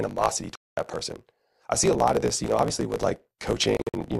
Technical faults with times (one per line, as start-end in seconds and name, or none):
0.00-4.20 block size mismatch (truncated)
0.55-0.78 digital broadcast dropout
3.77-3.94 digital broadcast dropout